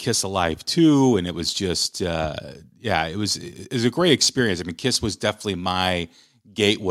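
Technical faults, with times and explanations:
The speech signal stays continuous, with no technical faults to report.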